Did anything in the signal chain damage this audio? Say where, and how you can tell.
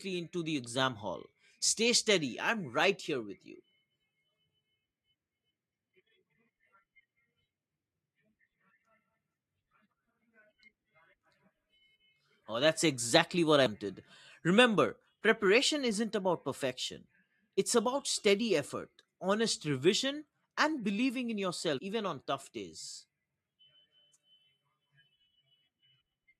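Yes, in the codec: compressed frames were skipped at 13.66 s after "that's exactly what" (about 150 ms lost) and at 21.77 to 21.79 s between "revision and believing in" and "even on" (about 100 ms). Roughly 7 and 5 whole frames go missing, so the audio jumps ahead at each point. The spectrogram shows a break where the harmonics jump.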